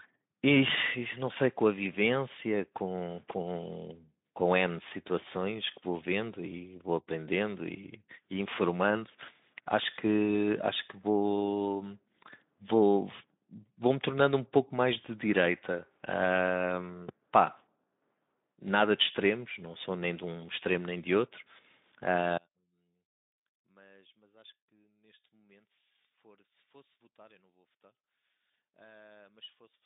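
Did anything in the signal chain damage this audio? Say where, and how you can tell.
Yes. From 22.37 s to 29.85 s the speech abruptly sinks by about 29 dB, leaving a faint residue. That collapse is one channel inverted: one leg of the stereo pair has reversed polarity, so the shared content cancels on the mono sum. The stage is likely analogue wiring, such as a reversed conductor pair. The narrow Speex telephone band, ending near 3.7 kHz, is audible throughout.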